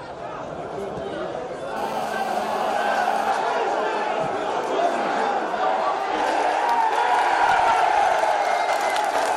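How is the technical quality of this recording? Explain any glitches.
The recording has one clear glitch, a GSM phone buzz from 1.77 s to 3.31 s. A 2G phone close to the recording chain was transmitting in bursts about 217 times a second. The audio circuitry rectified those radio pulses into the signal. The result is a hard, raspy buzz at 217 Hz, rich in harmonics and unrelated to the sound itself. It stays nearly steady, as during a call. It sits about 13 dB below the signal.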